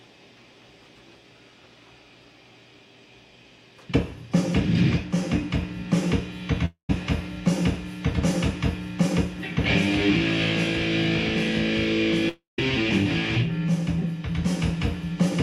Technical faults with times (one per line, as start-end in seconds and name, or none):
6.65-6.90 long network dropout
12.29-12.59 long network dropout